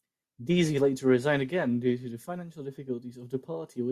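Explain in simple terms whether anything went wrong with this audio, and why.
Nothing went wrong here: no audible faults anywhere in this speech recording.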